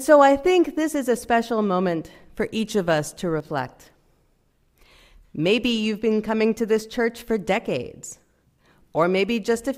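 At 3.40 s the sound briefly dips, recovering by 3.45 s. This is one channel dropping out. For about 50 ms, the level falls abruptly by about 6 dB. The likely cause is a lost stereo channel, leaving half the signal in the mono sum.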